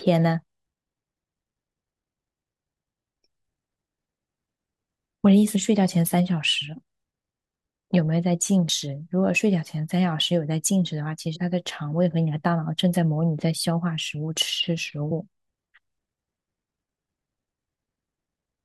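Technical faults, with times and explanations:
5.55, 8.68, 11.35 and 15.10 s: compressed frames skipped. Several 21.3 ms frames drop out, so the speech jumps ahead roughly a tenth of a second, a little less at 15.10 s. Overlapping frames leave a brief smeared blip rather than a click, seen as a soft vertical smudge and an abrupt waveform change.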